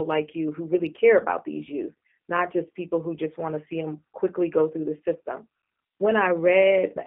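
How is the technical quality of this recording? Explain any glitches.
The recording is noticeably degraded throughout. The G.729 codec runs across the whole clip. It rebuilds speech from a vocal tract model, a pitch predictor and a few pulses per frame, which fits an 8 kbit/s stream. The band runs only from 200 Hz to 3.4 kHz, so speech sounds muffled, rough and slightly synthetic.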